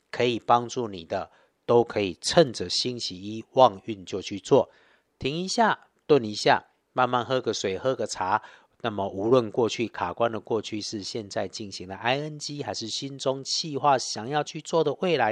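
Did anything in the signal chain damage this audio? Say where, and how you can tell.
No, nothing in this speech recording points to damage anywhere along the chain, so there's no stage to single out here.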